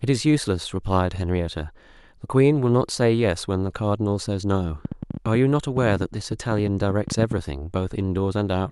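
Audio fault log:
4.85–7.39 s: train of clicks, roughly thirty similar pulses at about 10.3 per second, irregularly spaced and loud over the speech, likely from nearby interference or a faulty connection.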